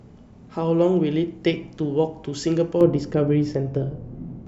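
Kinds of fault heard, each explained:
De-emphasis applied wrongly: a treble-cut filter meant to reverse pre-emphasis is acting on speech that never had it, or has been applied twice, so from 2.81 s onward the sound turns dull and muffled, about 11 dB down at 10 kHz relative to 1 kHz. A spectrogram shows the upper bands fading smoothly rather than cut off sharply.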